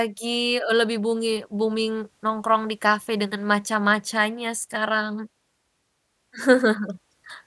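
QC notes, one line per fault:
No faults found in the speech. Nothing calls for a timed entry.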